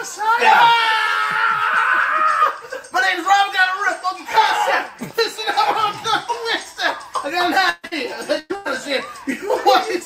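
At 7.69 s a burst of packet loss begins: about 140 ms never arrived, so the receiver stretches the last sound into a held buzz or hiss that fades, briefly drops to silence, then resumes further on with that stretch gone. A second, separate short concealed packet loss follows at 7.87 to 7.93 s. Only 40 ms is missing, and the gap is patched and blended back so quickly that it comes across as a quick smear or wobble rather than a sustained, fading tone. Two more bursts hit at 8.39 to 8.51 s and 8.55 to 8.67 s, each hiding about 100 ms behind a dying extension, the first ending in a brief silence.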